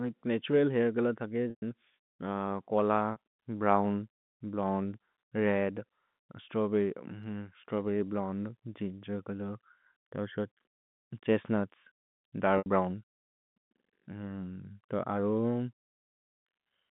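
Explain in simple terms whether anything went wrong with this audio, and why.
Yes, a few small dropouts. This is packet loss with pitch repetition: bits of the stream never arrived, and the receiver covered each gap by replaying the last tiny slice of the sound's pitch. The short one at 3.12 to 3.16 s (about 40 ms) sounds like a brief buzzy hold. The 80 ms gap at 12.58 to 12.66 s stretches further, and the longest, 120 ms at 1.5 to 1.62 s, is where the patch runs out and briefly fades toward silence on the phone-quality line.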